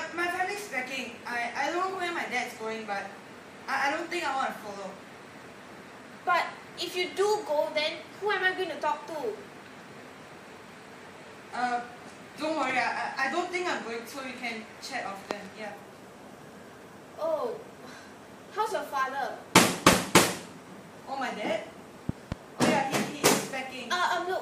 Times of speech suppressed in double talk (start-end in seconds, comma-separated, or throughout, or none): none